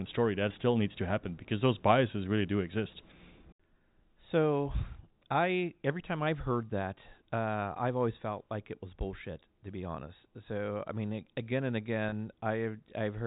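Speech over a telephone path, with G.711 coding cutting everything above 4 kHz, has one instance of packet loss with pitch repetition at 12.09 to 12.12 s. About 30 ms went missing, which fits a single lost packet. The receiver bridged it by looping the last pitch period, so the sound briefly holds on a slightly buzzy, sustained tone. On a spectrogram the harmonics run flat and frozen across that gap, and the waveform shows identical cycles repeating before normal motion resumes.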